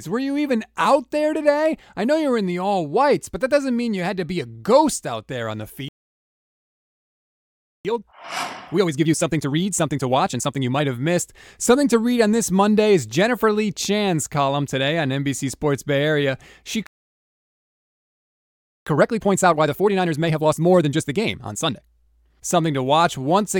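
At 5.89 to 7.85 s and 16.87 to 18.87 s, the speech halts for about 2 s in a playback stall, likely a starved buffer or blocked thread. Each appears as a flat, empty gap in the waveform. From 7.85 to 10.85 s and 18.87 to 21.87 s, time-compressed catch-up plays the backlog at 1.5x speed and normal pitch. It sounds hurried, with squeezed, tightly packed syllables on the spectrogram.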